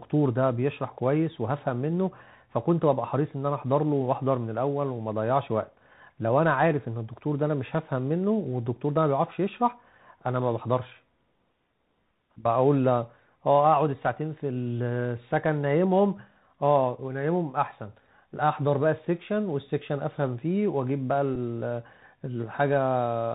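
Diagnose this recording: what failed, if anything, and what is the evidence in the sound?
The codec stage failed throughout. This is the Bluetooth CVSD headset codec. Nothing passes above 4 kHz. S sounds turn scratchy, and a granular hiss sits under the speech. A one-bit up-or-down coder with an adaptive step can't track fast high detail, which fits a 64 kbit/s CVSD link.

The radio link failed at 21.35 s, where a Bluetooth headset packet was repeated. A brief buzzy tick of about 7.5 ms breaks the speech. Lost voice data was replaced by decoding the previous packet's bits again, which fits two missing 3.75 ms packets.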